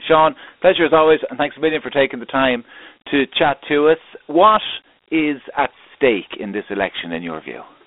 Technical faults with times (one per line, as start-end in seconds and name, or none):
0.00-7.86 Dialogic VOX ADPCM